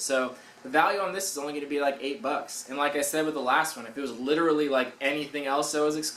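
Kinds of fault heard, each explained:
No audible technical faults were found in this clip.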